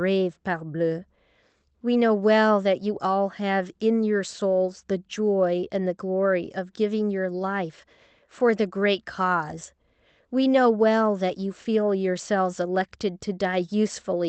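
No technical faults are audible.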